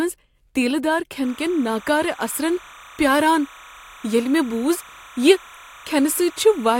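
Timecode bleed runs from 1.24 s, just after "تیٖلہ دار", to the end. Linear timecode from an adjacent line is leaking into the speech path. Its square wave flips between roughly 1 and 2 kHz, about 25 dB under the speech, heard as a steady chirping warble whose rhythm fits 30-frame timecode.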